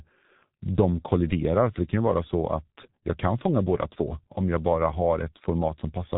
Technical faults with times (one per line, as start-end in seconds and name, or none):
0.00-6.17 G.723.1 codec